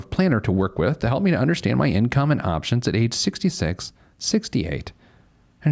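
Speech recording with no technical faults audible anywhere in the clip.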